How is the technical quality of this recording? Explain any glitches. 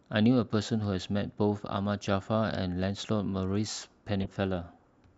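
One real glitch in the speech, near the end. From 4.21 to 4.27 s there's a corrupt frame decoded: flipped bits in a couple of compressed frames got played anyway, so misread gains and codes throw energy into the wrong frequencies. You hear a short glitch, peaking around -25 dBFS.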